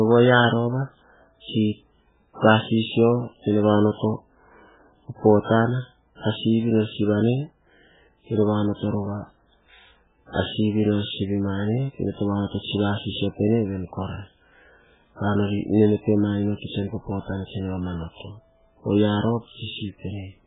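Throughout this speech clip the sound is dull and watery, with a swirling, bubbling texture, smeared onsets and nothing above 3.8 kHz. This is likely heavy MP3 compression at a very low bitrate, consistent with about 8 kbps, where the encoder drops the treble and switches weak frequency lines on and off between frames.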